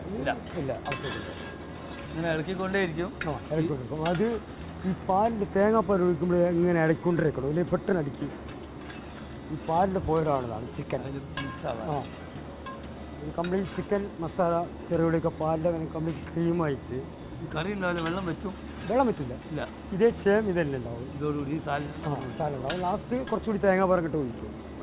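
No faults are audible; the band stops at 4 kHz, which fits a narrowband G.711-style call path working as intended.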